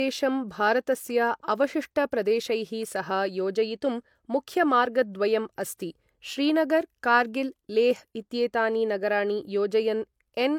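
Low-bitrate audio saved at a high bitrate runs throughout: the speech stops near 20.2 kHz, likely from earlier low-bitrate losses carried into a roomy MP3.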